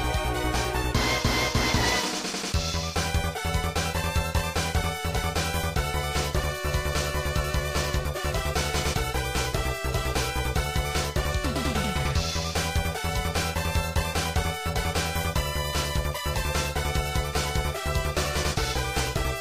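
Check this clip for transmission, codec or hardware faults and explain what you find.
One fault is audible. CD scratch ticks, 13.93 to 15.14 s: seven ticks. Once per disc revolution, a scratch destroyed more data than error correction could rebuild, so the player interpolated or muted those samples. The result is regular clicks about five per second, the longest roughly 1.5 ms.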